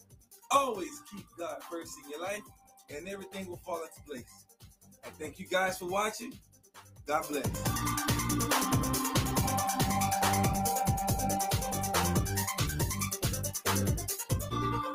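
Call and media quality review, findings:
Noise suppressor applied to music or sounds, whole clip: a speech-tuned suppressor is still in the chain. It treats sustained content and tails as noise, so level pumps by roughly 10 dB and the sound thins out. Attacks mostly survive.

Sound cut by the noise suppressor: ducks at 0.0–0.48 s (about 19 dB), 1.0–1.39 s (about 12 dB), 2.42–2.92 s (about 13 dB), 3.88–4.07 s (about 8 dB), 4.24–5.2 s and 6.33–7.04 s (about 19 dB each). Held parts get pulled down and decays are cut short.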